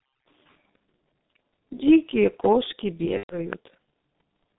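Throughout, the speech sounds muffled and hoarse with smeared consonants, confined to roughly 150 Hz to 3.7 kHz: heavy G.723.1 codec damage, its slow 6.3 kbit/s voice model blurring detail. From 3.17 to 3.39 s the sound turns into a stretched, fading sound. This is VoIP packet loss concealed by the speech codec, which extrapolated across about 120 ms of missing audio, fitting four 30 ms frames.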